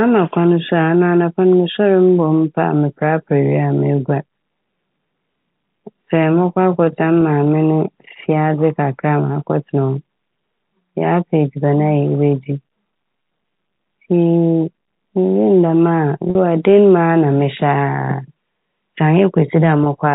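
Packet loss with pitch repetition hits this speech at 7.21 s, 16.30–16.35 s and 19.84–19.86 s; the last pitch period is replayed to bridge each gap, causing brief buzzy holds.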